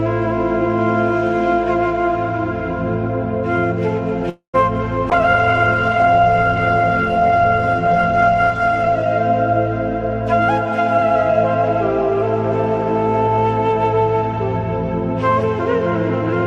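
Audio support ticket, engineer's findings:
Call audio freeze, 4.29 to 4.56 s: the sound stalls, the last bit stretches into a fading buzz, then there is about 0.11 s of silence before it resumes where it left off. Most likely late packets draining the jitter buffer, so about 0.24 s of gap is inserted and nothing is lost. On a waveform: a decaying smear, then a flat stretch. On a spectrogram: blurred, fading bands, then a blank column.

Call bitrate drop, 5.11 to 9.18 s: the audio turns rough, watery and duller for about 4 s, then clears. The encoder rate falls from 96 to 11 kbps after the bandwidth estimate drops, and Opus codes much more coarsely and narrows its audio bandwidth from 20 kHz to 12 kHz. On a spectrogram: a hard ceiling at 12 kHz with smeared, blocky texture below it. The waveform shows little change.

Jitter buffer speed-up, 13.27 to 14.37 s: the audio runs hurried but at unchanged pitch, at about 110% of normal speed. 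The receiver trims short pitch-period slices again and again to shed excess buffered delay, removing about a tenth of a second overall. On a waveform: slightly compressed timing with tiny splice points. On a spectrogram: events closer together while the harmonic spacing stays the same.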